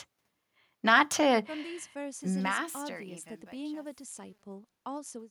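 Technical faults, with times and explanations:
2.12–5.30 s, truncation distortion on a fade: as the speech fades out from about 2 s, the tail turns gritty, and it is at its worst from 2.93 s. The fade keeps too few bits without dither, consistent with about 10-bit resolution, so quiet samples collapse into coarse square steps.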